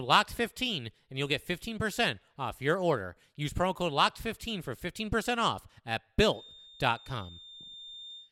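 A feedback whistle enters at 6.26 s and holds through to the end of the speech at 8.32 s. A thin, steady tone near 3.6 kHz sits well under the voice, roughly 20 dB down, swelling and fading slowly in level. The likely cause is a loudspeaker-to-microphone loop running just at the edge of feedback: gain around the loop is high enough to sustain that single frequency but not enough to let it build into a howl.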